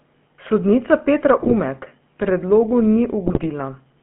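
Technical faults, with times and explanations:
Throughout: GSM full-rate codec. The sound has a buzzy, gravelly roughness. The band stops near 3.4 kHz and starts near 150 Hz, so the top end is dull and the lows thin. The decoder rebuilds each stretch from a vocal-tract filter driven by sparse, regularly spaced pulses. Most fine detail of the excitation is discarded. That coarse pulse train produces the grit. It fits a 13 kbps full-rate stream.
1.40–1.53 s and 3.26–3.47 s: GSM bit errors. Both stretches break into squawks, pops and gargling, and the second lasts longer. Flipped bits corrupted the filter, pitch and gain values the decoder relies on. Bad filter values warp the spectrum. Bad gain values make the level jump. The damage fits several consecutive 20 ms frames hit, with a few percent of bits wrong.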